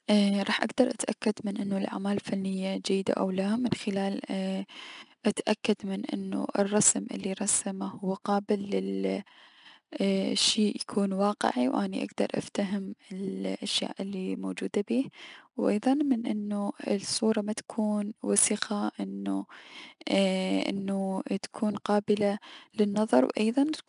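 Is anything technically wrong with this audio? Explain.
Yes, the speech carries plainly audible 4-bit ADPCM compression damage throughout. Each sample is coded as a coarse step from a prediction, so the error tracks loudness. Loud passages carry a gritty hiss, and sharp onsets sound rough. Nothing sits above 10.6 kHz, which fits a sample rate near 22 kHz. On a spectrogram, a noise haze thickens with every loud passage and stops at a flat ceiling.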